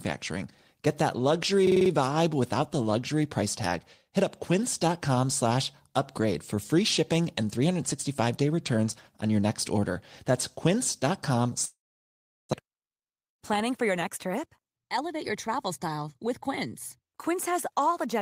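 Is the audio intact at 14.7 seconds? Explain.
No. From 12.63 to 15.58 s a jitter buffer speed-up trims short pitch-period slices. The speech runs about 8% faster, same pitch, hurried, until "style with".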